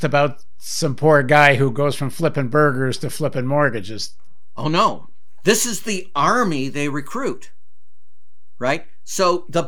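Speech runs for the whole clip with no audible defect, yet the waveform sits off centre from start to finish: a DC offset of about -26 dBFS. The constant shift wastes headroom, bringing clipping closer on peaks, and appears as steady energy at 0 Hz.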